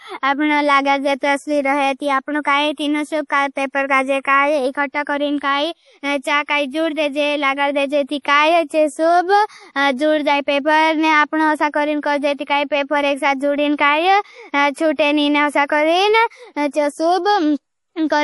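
From start to end the speech carries plainly audible damage, likely MP3 compression. Nothing sits above 11.5 kHz, and what remains has a watery, swirling texture that fits a low bitrate around 48 kbps. A plain low-pass filter would dull the top without the swirl.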